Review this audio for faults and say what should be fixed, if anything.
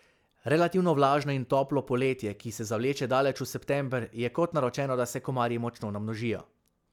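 Nothing to fix: no faults were found in the speech recording.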